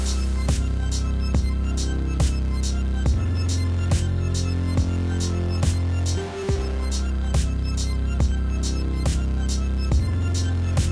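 Everyday sound recording, no technical faults heard at any point.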